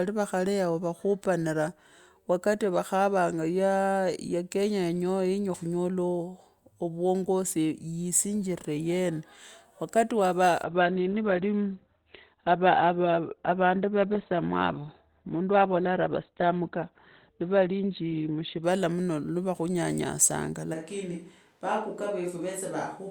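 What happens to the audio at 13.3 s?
At 13.3 s the speech is inside a stretch of adaptive stream at a lower bitrate, 10.64 to 18.64 s, where a slowed connection pushed playback to a leaner encoding, likely around 12 kbit/s. Treble vanishes and the speech turns thin. A spectrogram shows an abrupt flat ceiling at 4.4 kHz, and the waveform has no gap.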